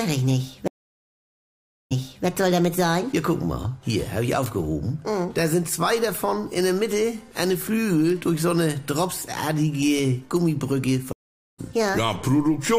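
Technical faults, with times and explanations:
0.16 to 12.58 s, word clock ticks: sharp ticks about every half second, around 30 in all, from a receiver on its own clock drifting roughly 50 ppm, slipping one sample each time.
0.68 to 2.26 s, stream reconnect: the link drops for 1.23 s, then a fresh decoder restarts 0.35 s earlier, so a short stretch repeats.
11.13 to 11.59 s, stream reconnect: another 0.46 s dropout, resuming roughly half a second later, so a bit of the stream is simply skipped.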